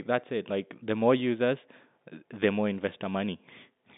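No technical faults can be heard in this speech. It comes through a G.711 telephone line, which keeps the sound within a band of roughly 200 Hz to 3.7 kHz, with nothing above about 3.8 kHz.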